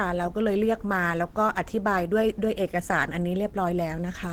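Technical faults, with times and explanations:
Throughout, Opus compression: the speech sounds hoarse and grainy, plainly so, likely from the codec's hybrid speech mode at a low rate, something like 16 kbps.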